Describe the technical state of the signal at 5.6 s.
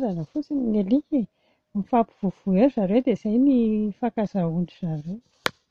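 At 5.6 s the speech signal is intact, with no audible technical fault.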